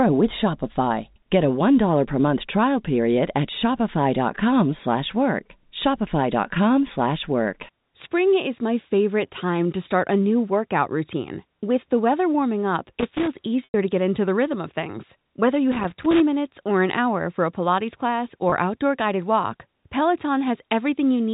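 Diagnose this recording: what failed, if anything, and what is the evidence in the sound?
Loose connector crackle in the analogue wiring. Irregular bursts of scratchy crackle run from 12.99 to 13.42 s and from 15.72 to 16.20 s. A worn or dirty contact is making and breaking as it moves. This chops the signal.

Packet loss with pitch repetition on the network path. From 13.64 to 13.74 s a 100 ms gap is bridged by repeating the last pitch period. It sounds briefly held and buzzy, then fades before the speech cross-fades back. That fits about five lost 20 ms packets of the G.711 telephone stream. A shorter 20 ms gap at 18.50 to 18.52 s gives only a slight buzzy hold, consistent with one lost packet.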